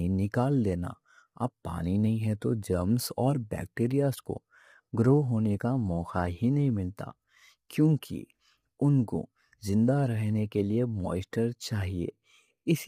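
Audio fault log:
Throughout, low-delay AAC compression: heavily rough, grainy speech with noise between harmonics, likely AAC-ELD's short frames starved of bits, consistent with roughly 24 kbps.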